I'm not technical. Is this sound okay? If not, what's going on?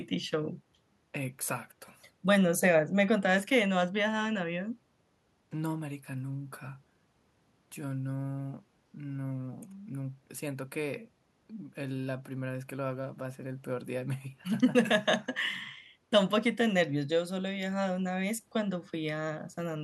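Yes, no faults heard.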